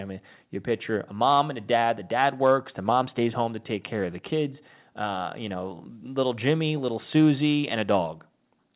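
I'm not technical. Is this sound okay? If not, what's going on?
Yes, this speech sounds fine, with just the narrow, phone-call quality you'd expect from a call line that carries nothing above about 4 kHz.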